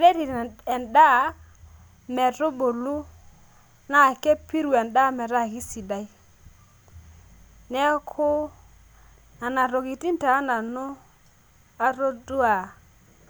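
Listening to this speech recording, nothing stood out as a technical problem at any point.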